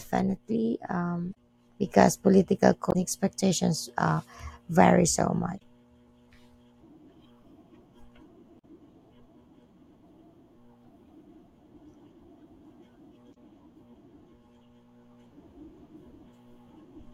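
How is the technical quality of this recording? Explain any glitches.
The speech is marred by five short glitches from damaged data in a compressed stream, at 1.31–1.35, 2.89–2.96, 5.56–5.62, 8.58–8.64 and 13.31–13.37 s. Corrupted bytes make the decoder misread frames and resynchronise, producing brief chirps or squawks.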